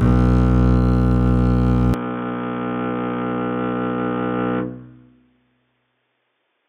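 At 1.94 s the music suddenly turns dull and boxy and stays that way to the end. Nothing reaches above 3.6 kHz from that point. The level drops by roughly 10 dB. A faint new noise floor appears, far below the music. There is no gap at the change. This is most likely an input switched to a poorer device, such as another microphone or a headset's call profile, which passes a narrower band.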